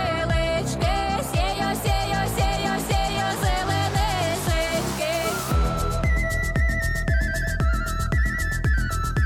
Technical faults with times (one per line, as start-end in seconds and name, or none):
none